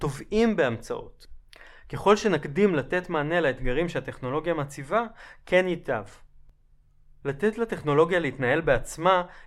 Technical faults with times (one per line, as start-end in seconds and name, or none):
none